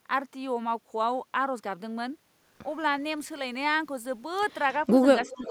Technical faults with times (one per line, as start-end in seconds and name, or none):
5.19-5.43 echo leak
5.22-5.50 speech suppressed in double talk